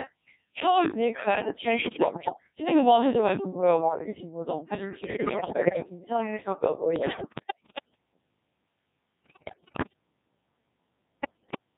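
From start to finish the speech carries heavy Codec 2 vocoder damage. The decoder rebuilds each frame from pitch, voicing, energy and a coarse spectral envelope, so the sound is robotic and buzzy. That is parametric synthesis, not the smeared, swirly loss of a waveform codec, and it fits roughly 1.6 kbit/s.

At 1.81–2.34, 5.04–5.89, 6.96–7.95, 9.25–9.93 and 11.20–11.58 s come bit errors on digital voice radio. Corrupted bits scramble frame parameters, so the voice jumps in pitch and level and breaks into bleeps and warbled gibberish rather than dropping to silence as lost packets would.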